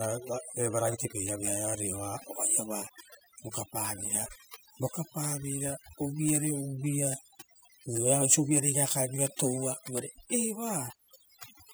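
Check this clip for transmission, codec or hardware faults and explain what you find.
One fault is present, and it runs the whole clip: overdone noise removal. A noise reduction stage has been set far too aggressively, so any frequency band sitting close to its noise estimate gets pushed down or switched off entirely. The low-level parts of the speech fall into that range and are stripped out with the noise. The result is a background that drops and breaks up into twinkling, warbling specks.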